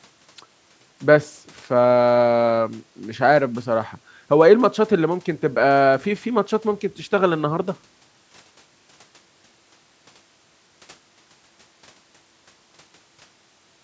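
Speech that has gone through a call's microphone processing, with the lowest bass trimmed and no content above 8 kHz, shows no technical faults.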